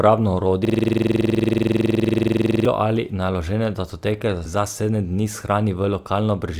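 From 0.65 to 2.65 s a system hang loop replays one 46.4 ms slice of speech about 43 times, a 21.5 Hz rasping stutter that fits a 2048-sample ring buffer cycling while the system froze. Unlike dropout stutter, every repeat is identical, with no gaps.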